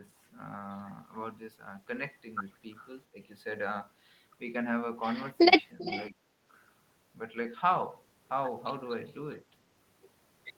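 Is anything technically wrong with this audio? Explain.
Yes. Between 2.76 and 2.88 s, and again from 5.79 to 6.04 s, there is echo leak: a copy of the speech returns about 394 ms late. It is very faint the first time and only around 15 dB down the second. The likely cause is a far-end echo canceller letting loudspeaker pickup through.

At 3.12 to 3.17 s and at 6.10 to 6.15 s, the speech is suppressed in double talk. The level dips by roughly 10 dB and then roughly 5 dB for about 50 ms each time. This is likely the echo canceller attenuating the talker while both sides overlap.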